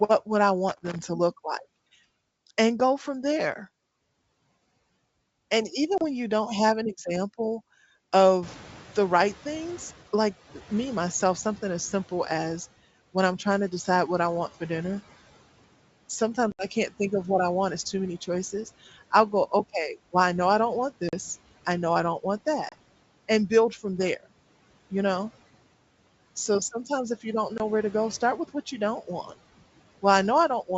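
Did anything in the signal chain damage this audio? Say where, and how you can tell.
Yes. Analogue wiring: a scratchy, irregular crackle runs from 0.69 to 1.02 s, between "would I" and "to look like", and again from 23.96 to 24.09 s. This is loose connector crackle: a worn or dirty contact chops the signal as it makes and breaks, with pops from DC on the line.

Network: hard-edged gaps cut the audio at 5.98 s (30 ms, just before "when you don't have"), 16.52 s (70 ms), 21.09 s (40 ms, between "know I don't want" and "I know I don't"), 22.69 s (30 ms) and 27.58 s (20 ms). After each, the sound returns slightly distorted for a moment. This is packet loss on an ADPCM call, which fits G.722 coding. Lost packets are replaced by silence, and the decoder's predictor and step size drift from the sender's until they resynchronise.

Call processing: when the room noise jumps by about 17 dB around 8.5 s, it comes through loud at first and then sinks by about 10 dB over the 1.97 s from 8.42 to 10.39 s. 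This is the noise suppressor catching up: its noise estimate lagged the sudden rise and took that long to adapt.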